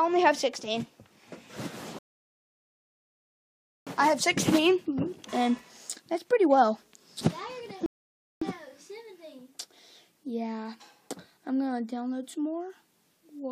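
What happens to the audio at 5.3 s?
Nothing goes wrong at 5.3 s; the audio runs through that moment intact, with no dropout, click, distortion or other fault to be heard.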